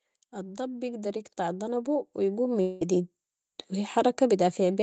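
Automatic gain rising from 0.3 to 3.06 s: the gain control, finding the input too quiet, lifts the level by about 13 dB, so speech and background swell together. Long network dropout from 2.61 to 2.83 s: about 200 ms of sound is missing, likely lost in transit, and a fading buzz or hiss fills the gap before speech resumes further on.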